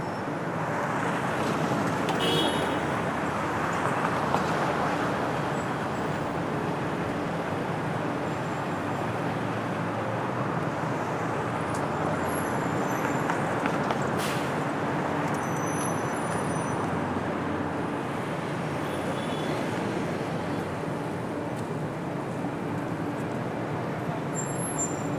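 At 4.48 s (lasting about 20 ms), 12.63 s and 24.75 s there are short bursts of damaged data in a compressed stream. Corrupted bytes reached the decoder, which decoded nonsense for a moment and then resynchronised on the next valid frame. Each is heard as a brief glitch caused by misread frame data.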